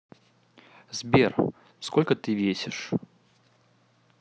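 No technical faults are audible.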